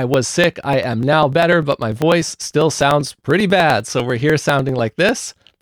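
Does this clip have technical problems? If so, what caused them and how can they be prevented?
Yes. Periodic USB or driver dropouts run from 0.14 s to 5.48 s, roughly every 0.1 s. Each time, something stalls the USB bus or the audio driver, and about a millisecond of audio is skipped outright. The splice leaves around fifty regular ticks, audible wherever speech is present. To prevent it, find and disable the background process that periodically blocks the bus, and give the interface a dedicated USB port with power saving turned off.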